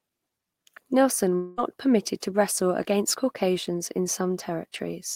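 A long network dropout is the likely cause at 1.35 to 1.60 s: the stream stopped delivering audio for roughly a quarter of a second, and the receiver covered the gap by stretching the last sound it had. That fill lasts about 220 ms, heard as a fading buzzy smear rather than silence, and when the speech resumes on "permitted to wrestle against", about 220 ms of the original is gone, so the words jump forward abruptly.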